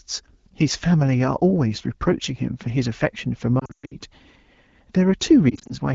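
Lost AMR speech frames at 3.59 to 3.95 s: the decoder repeats the last good pitch and vocal tract settings at falling gain, so runs up to 120 ms drop to near silence within two frames. At 5.49 to 5.74 s, single 20 ms frames cause brief warbles.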